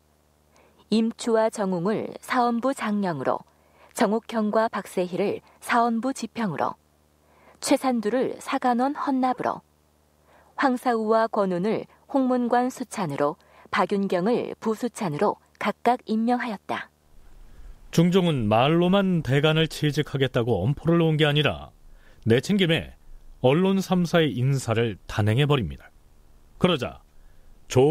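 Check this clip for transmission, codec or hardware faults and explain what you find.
One hardware fault runs through the whole speech clip: video or display buzz. A screen or video cable is coupling into the audio path, adding a steady 75 Hz buzz at the display's field rate with fine hash above it, sitting roughly 40 dB below the speech.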